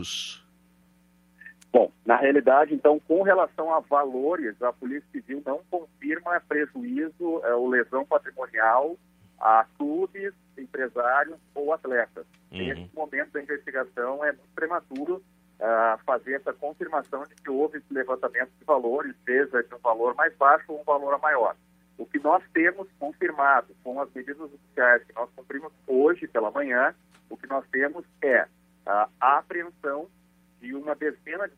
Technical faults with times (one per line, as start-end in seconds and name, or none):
none